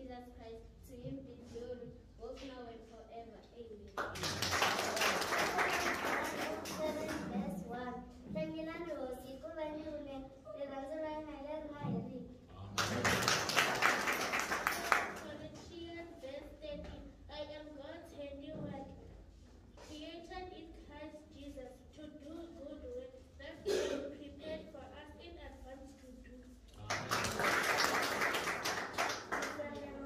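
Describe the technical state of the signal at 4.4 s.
Nothing is wrong with the signal at 4.4 s; it is intact at that moment.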